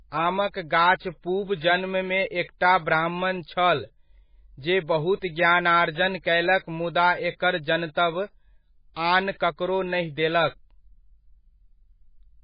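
From start to finish the speech carries heavy damage consistent with MP3 compression at a very low rate, around 16 kbps. Nothing survives above 5 kHz, so sibilants lose their edge and the sound is dull and band-limited. With so few bits, the encoder likely dropped weak frequency lines, which flicker in and out between frames and give a watery, swirling texture, with metallic chirps on s sounds and smeared consonant onsets.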